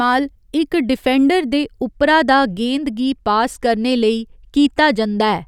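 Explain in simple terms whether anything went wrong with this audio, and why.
From 1.88 s to the end, a channel delay (comb filtering) slightly dulls the very top treble: one channel runs a hair late, cancelling sound near 20 kHz, unlike an audible echo.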